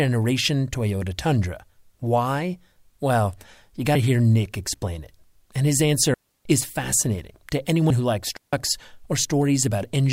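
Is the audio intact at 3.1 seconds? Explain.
Yes, the speech at 3.1 seconds is intact, with no audible fault at that moment.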